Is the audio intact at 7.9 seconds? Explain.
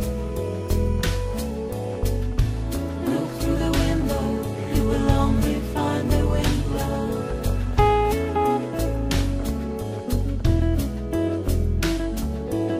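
Yes, at 7.9 seconds the audio is intact, with no dropout, click, distortion or other fault audible at that moment.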